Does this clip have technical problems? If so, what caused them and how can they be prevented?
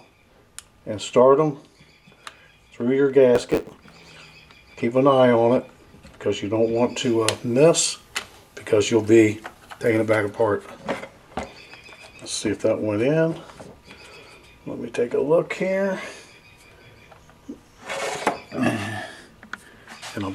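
Yes. From 3.34 to 4.10 s there is a block size mismatch, with truncation. One stage writes longer blocks than the next stage reads. The tail of each block is discarded. This causes a buzz at about 92 Hz, the rate at which the cuts repeat. The sound also runs 1.07 times fast while the pitch stays about normal. The pattern fits 512-sample blocks written into a smaller read size. To prevent it, set the same block size at both stages.

From 7.04 to 10.31 s, pre-emphasis was left on. The treble was boosted before storage, and the matching de-emphasis cut was never applied. At 10 kHz the highs sit about 8 dB above their level at 1 kHz. The sound is thin, bright and sibilant. The shape of the boost fits the CD 50/15 µs curve. To prevent it, honour the pre-emphasis flag and apply de-emphasis on playback or import.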